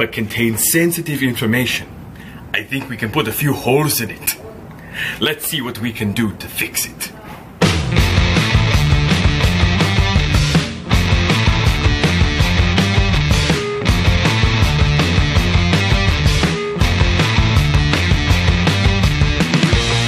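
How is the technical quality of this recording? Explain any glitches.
Three brief glitches at 7.27, 16.37 and 19.41 s are compressed frames skipped: whole 23.2 ms frames missing or rejected by the decoder, so the audio jumps ahead by about 50, 20 and 50 ms.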